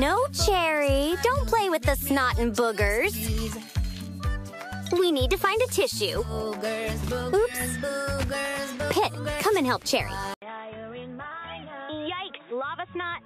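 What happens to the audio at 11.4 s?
From 10.34 s to the end, the sound goes dull and boxy after an 80 ms silence, with nothing above 3.8 kHz, a roughly 10 dB lower level and a new noise floor. The likely cause is the input switched to a poorer device. That gap and the new noise set it apart from a plain filter change.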